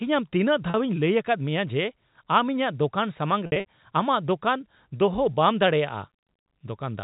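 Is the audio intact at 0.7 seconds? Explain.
No. Right after "ᱟᱢ ᱛᱤᱱᱟᱹᱜ", from 0.70 to 0.74 s, there is packet loss with pitch repetition. About 40 ms of signal never arrived, which fits two 20 ms packets. The receiver filled the hole by looping the last pitch period it had received and fading it down. A gap this short never reaches silence, so it comes across as a brief held, slightly buzzy tone before the speech resumes.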